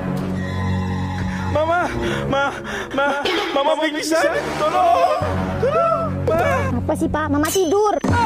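A doubled audio track runs from 2.91 to 6.71 s: a second, full-band copy trails the sound by roughly a tenth of a second, about 5 dB quieter, with no decay or room colour. It likely comes from a slower capture path, and it cuts in and out abruptly.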